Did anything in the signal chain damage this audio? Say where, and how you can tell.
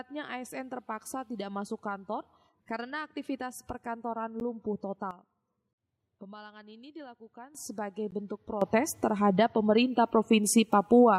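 Yes. Two blocks of digital silence, at 4.40 s (10 ms) and 8.11 s (13 ms), point to the driver or buffer stage missing its deadline. On the waveform each is a near-flat line with abrupt edges; the spectrogram shows thin broadband vertical stripes at those edges.

Sudden gain jumps: the level drops about 12 dB at 5.11 s and returns at 7.55 s, then rises about 12 dB at 8.62 s through the end. Sound and noise floor step together, with no ramp, likely a gain setting or bit shift applied instantaneously. The waveform envelope shows hard steps, and the spectrogram's background brightness shifts at the same instants.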